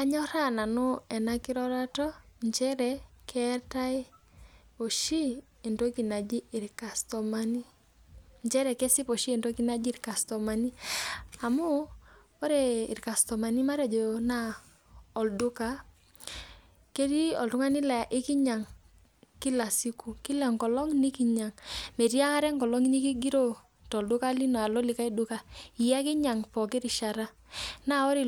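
No technical fault can be heard anywhere in the speech recording; the signal stays steady and intact throughout.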